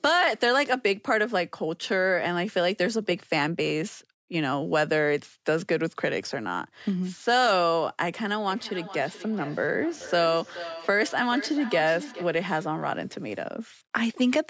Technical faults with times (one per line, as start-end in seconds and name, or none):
8.48-12.46 feedback echo between two devices